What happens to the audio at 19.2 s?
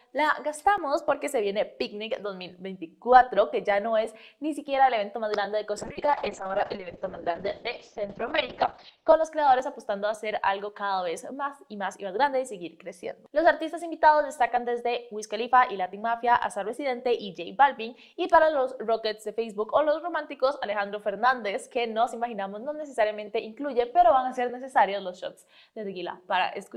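Nothing goes wrong at 19.2 s; the audio plays through that moment intact, with no dropout, click, distortion or other fault.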